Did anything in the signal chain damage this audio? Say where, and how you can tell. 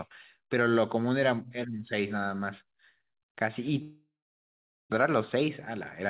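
Yes. Network stage: at 3.82 s the sound smears into a fading buzz, then silence until 4.94 s. About 0.6 s is missing, likely a long network dropout.

Buffer stage: from 5.04 to 5.46 s the speech runs about 16% faster at unchanged pitch. This is jitter buffer speed-up, trimming roughly 70 ms of pitch periods.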